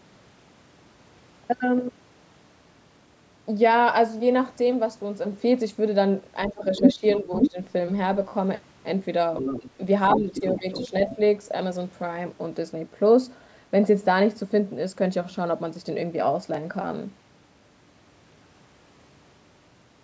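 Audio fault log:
6.48 to 7.58 s, 9.60 s and 10.15 to 11.18 s, speech suppressed in double talk: during each overlap with the far end the talker's level is pulled down by roughly 10 dB. The first and third passages lose about half a second and 0.4 s of their length to the cut, and at 9.60 s there is a single short dip. The likely cause is an echo canceller that cannot tell near-end speech from loudspeaker echo while both are active, so it attenuates everything in the microphone path at once.
6.49 to 7.50 s, 9.37 to 9.70 s and 10.08 to 11.16 s, other side's voice leaking through: a second voice sits underneath the talker in these stretches. In the first it is strong, around 5 dB above the talker's speech. In the later two it is much weaker, about 10 dB below. This is likely residual loudspeaker echo that the canceller failed to subtract from the microphone signal. It arrives in the same windows where the talker is being suppressed, which points to the canceller struggling during double talk.
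8.29 to 8.32 s and 16.54 s, repeated buffer: at 8.29 s the same 16 ms chunk plays three times in a row, with a hard splice at each repeat. That is heard as a brief buzzy stutter rather than a word-length echo. At 16.54 s a single 16 ms repeat gives a click. The chunk length fits a 256-sample buffer being replayed when fresh audio did not arrive in time. No audio is lost, because the repeats are inserted and the stream then resumes.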